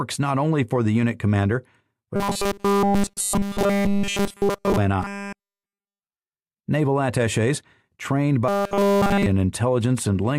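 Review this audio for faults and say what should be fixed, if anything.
Robotic sound from repeated short buffers occurs at 2.16 to 4.78 s, 5.03 to 6.02 s and 8.48 to 9.26 s. In each stretch the sound turns into a rigid, metallic buzz at 200 Hz, and essentially all of it is made of repeats. The likely cause is the playback path replaying its last block when fresh audio arrives too late. A 200 Hz buzz fits a 5 ms block. Prevent it with a larger jitter buffer and steadier delivery of audio to the output.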